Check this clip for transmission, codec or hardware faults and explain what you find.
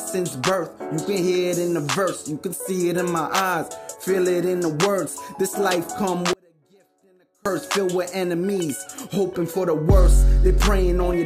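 One fault stands out. An audio dropout to a faint residue runs from 6.33 to 7.46 s. The sound abruptly collapses for about 1.1 s to a faint leak roughly 35 dB down, likely a signal break with the downstream path left live.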